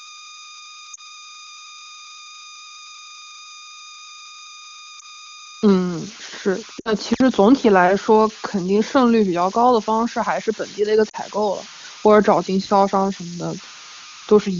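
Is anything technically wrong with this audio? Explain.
Yes. A steady whistle near 1.5 kHz sits about 17 dB below the speech throughout. These are converter idle tones: an undithered delta-sigma converter falls into repeating bit patterns on small input.

Lost AMR speech frames occur at 0.93–1.01 s, 4.99–5.05 s, 6.80–6.95 s and 11.09–11.16 s, covering about 40, 20, 60 and 40 ms. The decoder reuses the last good frame with falling gain, so the speech briefly warbles and fades.

Intermittent contact at 7.13–7.21 s opens the line for about 57 ms, cutting the sound out with crackle at each edge.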